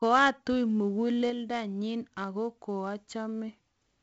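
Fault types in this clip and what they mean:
4-bit ADPCM compression: A gritty, level-following hiss rides on every loud stretch of the speech, with roughness on sharp attacks, and nothing is heard above about 7.8 kHz. Each sample is coded as a 4-bit step away from a predicted value, with the step size adapting as it goes. The resulting error is broadband noise that rises and falls with the signal. The damage here is heavy, which fits a 64 kbps stream.
Sudden gain jump: At 1.3 s the whole sound, speech and background noise alike, drops by about 4 dB in one step and stays at that lower level to the end. There is no fade between the two levels. Because the floor moves together with the speech, the change comes from the signal chain rather than from the talker. The likely cause is a digital gain setting or bit shift applied instantly, without a ramp.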